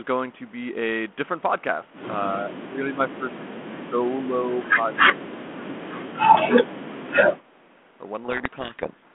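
Between 2.32 and 7.56 s the speech repeatedly sinks, at 2.32–2.99, 3.15–4.04, 4.74–4.94, 5.1–5.96 and 6.67–7.56 s, by about 20 dB (about 10 dB in the short 4.74 s dip). The likely cause is speech suppressed in double talk: the echo canceller mistook overlapping far-end sound for echo. The waveform shows chopped, shrunken envelope segments, and the spectrogram shows faded bands.

From 8.24 to 9.14 s the narrowband G.726 speech, limited to roughly 200 Hz–3.4 kHz, collapses into harsh, rasping distortion. This is a codec payload misread, consistent with the decoder reading the code-word bits in reversed order. The spectrogram fills with broadband noise up to the band edge, and the waveform turns dense and jagged.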